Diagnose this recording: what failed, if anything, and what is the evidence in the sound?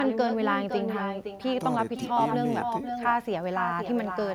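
The failure is in call processing: echo with no canceller. The far end is playing the call through a loudspeaker, its microphone picks that playback back up, and no echo cancellation removes it before it returns. Throughout the clip, every stretch of speech is trailed about half a second later by a second copy sitting about 6 dB down. That copy sounds thinner, since it has crossed the network twice and passed through a speaker and a room.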